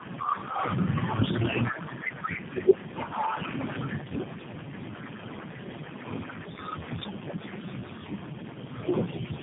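Throughout the speech, the signal shows tandem speech coding: it has passed through several low-bitrate speech coders in a row, which fits a chain of about three separate codec stages with a G.729A-type coder last. Each coder re-encodes the previous one's already damaged output, so the errors compound. The result sounds rougher and more warbly than a single narrowband codec would, and muffled, with nothing above 3.7 kHz.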